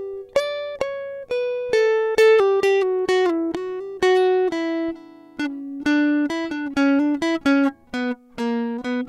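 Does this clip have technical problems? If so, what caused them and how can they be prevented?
Yes. Clock slip clicks run through the music from 0.16 s to 9.08 s. They are faint ticks about every 0.15 s, around 70 in all, and stand out most on loud or sustained passages. The likely cause is two devices on free-running clocks that differ by around 150 ppm. Each time the drift adds up to a whole sample, one sample is dropped or repeated. To prevent this, lock both devices to a shared word clock or use asynchronous sample-rate conversion.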